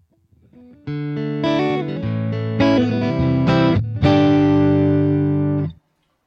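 No technical faults can be heard anywhere in this clip.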